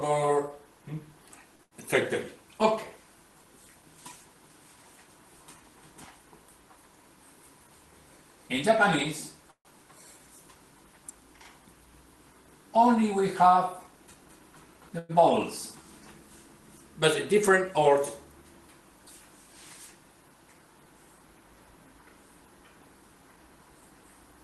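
At 1.55 s a packet arrived late and the jitter buffer ran dry, so the receiver held the last sound for about 37 ms before carrying on. This short stall from a late packet stretches the sound slightly with a faint buzz.

Overlapping it, from 1.63 to 1.74 s, a burst of packet loss drops about 80 ms of audio. The receiver extends the preceding sound as a fading buzz or hiss over that span, then resumes further on with that stretch gone.

Between 9.51 and 9.68 s packets were likely held up in transit and the buffer emptied. This call audio freeze inserts about 140 ms, heard as a decaying continuation that falls to silence for about 90 ms before the audio picks up exactly where it stopped.

From 13.43 to 17.36 s the buffer was holding surplus audio, and the receiver trimmed short pitch-period slices repeatedly to shed roughly a tenth of a second. In this jitter buffer speed-up the sound runs at 102% speed with pitch unchanged, a barely perceptible hurry.

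Inside that span, at 14.99 to 15.12 s, another call audio freeze appears. Packets were likely again held up in transit, and the receiver fills about 102 ms with a fading extension of the last sound. This time it never reaches silence, and the audio continues without loss.

A second jitter buffer speed-up runs from 23.02 to 23.82 s. It removes roughly 100 ms in that short window, so the sound races along at 111% speed at the same pitch and comes across as noticeably rushed.

Throughout, the call codec's coding noise and a top end limited to about 12 kHz fit an Opus stream at around 20 kbps.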